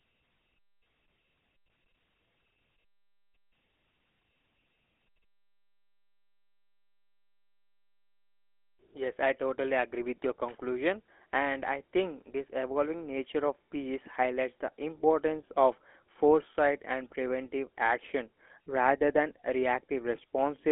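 From start to finish the speech carries the signature of the GSM full-rate codec, consistent with its 13 kbps mode: a buzzy, gravelly roughness that is plainly audible. The codec rebuilds the voice from a vocal-tract model excited by sparse, regularly spaced pulses, so natural texture turns grainy. The band is telephone-narrow, roughly 300 Hz to 3.4 kHz. A spectrogram shows empty space above 3.7 kHz and smeared, coarse harmonics below.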